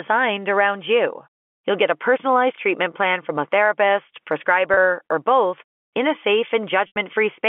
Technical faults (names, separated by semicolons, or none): packet loss with pitch repetition